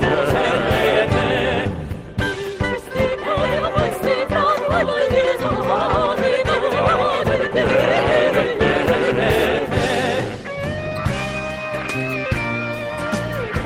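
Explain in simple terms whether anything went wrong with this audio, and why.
Nothing went wrong with this audio. Listening through it, no moment stands out as broken or disturbed.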